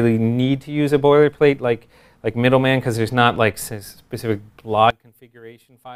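One channel inverted, from 4.90 s to 5.96 s: the level suddenly falls by about 22 dB. The likely cause is one stereo channel flipped in polarity, so when both channels are summed to mono, everything they share cancels and only their small difference remains.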